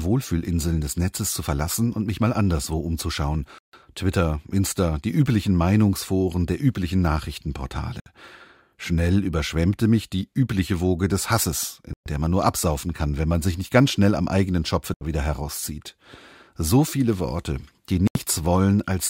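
Speech drops to dead silence at 3.58 s (after "mich mal anderswo umzuschauen"), 8.00, 11.93 (before "der man nur absaufen"), 14.94 (before "wieder herauszieht") and 18.07 s, for 61 to 149 ms each, then resumes. These are likely Bluetooth stalls from a drained headphone buffer, seen as flat waveform gaps and blank spectrogram columns.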